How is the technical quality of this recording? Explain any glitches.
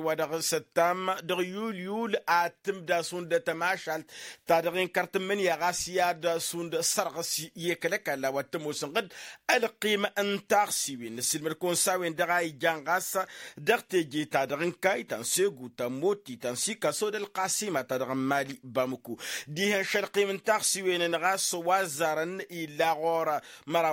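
No audible glitches or faults.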